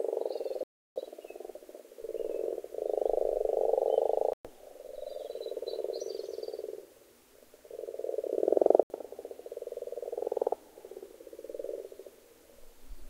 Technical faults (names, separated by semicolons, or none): Bluetooth stall